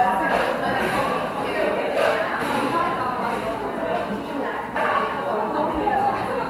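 No technical faults can be heard in this audio.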